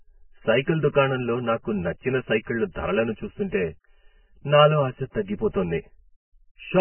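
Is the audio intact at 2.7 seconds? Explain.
No, at 2.7 s the speech sounds hollow and phasey throughout from channel delay (comb filtering): one side lags by around 5 ms, so the mono sum cuts notches starting near 100 Hz. It's also dull and grainy, with nothing above 3.1 kHz and roughened, smeared detail, likely heavy Vorbis compression at a very low bitrate.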